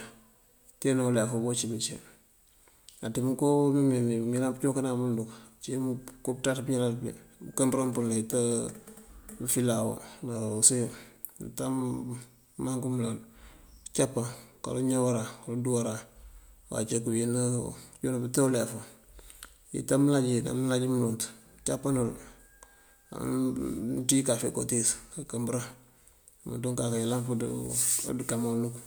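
No technical faults can be heard anywhere in this speech recording. Nothing in it calls for a timestamp or a correction.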